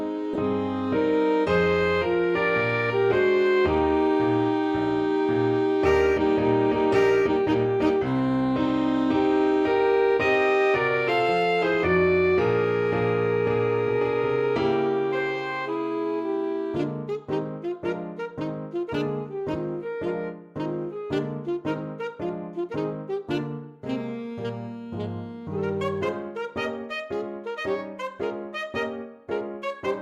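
At 0.33 to 0.36 s a corrupt frame decoded produces a short burst of misplaced sound peaking near -20 dBFS. Damaged bits in what sounds like a single compressed frame were decoded anyway, scattering energy across wrong frequencies. Unlike a dropout or plain click, it has misplaced spectral content lasting one frame.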